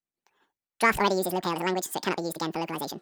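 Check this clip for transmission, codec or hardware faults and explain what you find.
One playback fault runs through the whole recording.

Wrong sample rate, from start to end: the samples are clocked out twice as fast as they were captured, with no conversion, which fits 24 kHz material played at 48 kHz. Speech runs at double speed and a full octave (12 semitones) higher, sounding squeaky and rushed.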